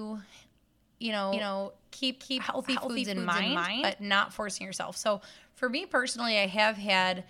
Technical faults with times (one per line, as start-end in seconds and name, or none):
1.33-3.93 doubled audio track